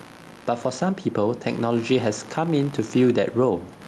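Processor, graphics or mouse load is disturbing the audio circuit's shared ground, so computer activity noise buzzes throughout at around 70 pulses a second, roughly 25 dB below the speech. A gain set far too high, likely clamped by a fast limiter, causes gain pumping the whole way through: the background rises in pauses and ducks by a few decibels under each loud syllable, flattening the speech. The room noise sits about 33 dB below the speech, and the top end stops near 12 kHz, which fits Opus at around 48 kbps.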